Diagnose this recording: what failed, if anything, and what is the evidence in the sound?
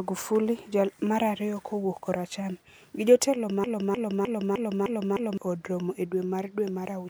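A broken-record loop runs from 3.64 to 5.38 s: a 0.31 s fragment of the speech repeats six times, identical and back to back, with no decay. The likely cause is a stalled player or stream buffer resending its last block, so the speech due there is lost, unlike an echo.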